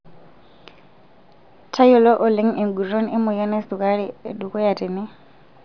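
No faults are audible anywhere in this recording.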